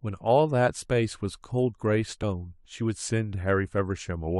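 At 2.22 s, damaged data in a compressed stream makes the decoder lose frame sync, giving a brief chirp, squawk, click or short hole, unlike a clean dropout's silence.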